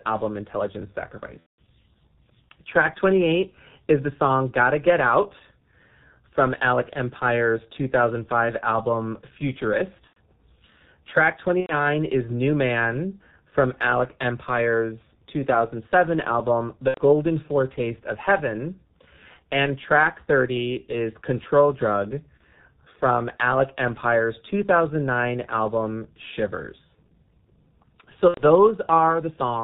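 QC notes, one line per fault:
Throughout: G.723.1 codec. Speech is muffled and hoarse, with nothing above 4 kHz and smeared consonants, which fits a heavily coded 6.3 kbit/s stream.
1.40–1.60, 10.07–10.18, 11.60–11.75, 16.88–17.01, 22.38–22.43, 28.28–28.43 s: VoIP packet loss concealed by the speech codec. Gaps are filled with a buzzy tone or coloured noise that fades. The 180 ms gap at 1.40 s is the longest.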